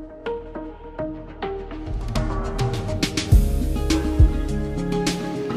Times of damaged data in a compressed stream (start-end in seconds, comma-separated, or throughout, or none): none